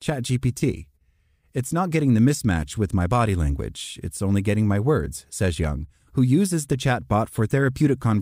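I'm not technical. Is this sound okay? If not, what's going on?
No. A single loud pop hits at 5.64 to 5.67 s, between "getting my words says" and "who uses the", louder than the speech, likely a brief electrical glitch.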